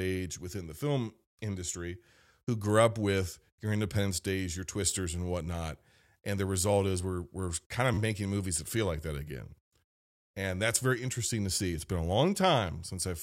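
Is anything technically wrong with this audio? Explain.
Yes. A repeated buffer occurs at 4.91 s, just before "and whatnot", and from 7.94 to 7.98 s, between "we're we're kind of" and "making movies that feel". Audio arrived late, so the device replayed its last block of about 12 ms (which fits a 512-sample buffer), once and then three times. Each event sounds like a brief buzzy stutter with hard joins.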